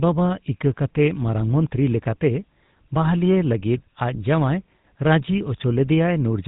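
From start to finish the speech carries the roughness of the GSM full-rate codec, a buzzy, gravelly texture that fits the 13 kbps full-rate mode. The codec rebuilds the voice from a vocal-tract model driven by regularly spaced pulses, keeping only every third excitation sample, so the voice gains a grainy buzz. Nothing passes above 4 kHz. That buzz is what separates it from simple band-limiting, which would dull the sound without adding any grit.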